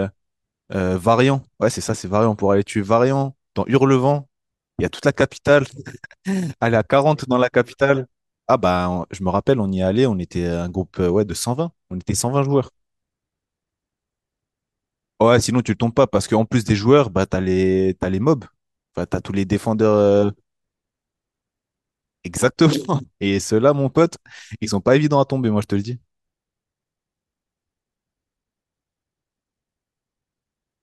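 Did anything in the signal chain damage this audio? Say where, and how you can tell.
No, nothing in the signal chain damaged this audio.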